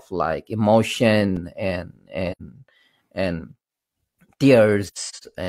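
Speech with AAC frame loss with muting: a soft dropout at 2.31 to 2.41 s, about 85 ms, then scattered gaps between 4.85 and 5.23 s, longest around a tenth of a second, faded in and out.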